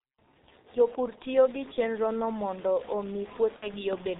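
A short speech clip that has gone through the G.723.1 codec the whole way, and it's heavily damaged by it. Nothing survives above 4 kHz, so it sounds muffled, and the slow-updating voice model makes it hoarse and smears the consonants. The thinness fits the 6.3 kbit/s mode, with 30 ms frames that don't track fast changes. From 1.24 s to the end a grainy, rough distortion rides on the sound and shifts with it, sitting at very roughly 20 dB below the signal. Quieter stretches get grittier and the quietest bits sputter or drop out. That's likely low bit depth without dither, something like truncation to about 6 bits, where the rounding error follows the signal instead of turning into a steady hiss. Around 3.56 to 3.68 s there's VoIP packet loss concealed by the speech codec. About 60 ms goes missing, which fits two lost 30 ms frames. The decoder fills the gap by stretching its last pitch and filter into a buzzy tone or coloured noise that fades. 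Because each frame builds on the previous one, the sound stays weak and a bit warped for a moment after real data comes back.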